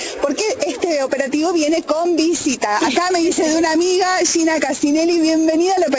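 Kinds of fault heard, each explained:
Nothing stood out on listening; the sound comes through a call link as expected, with no audible problems to report.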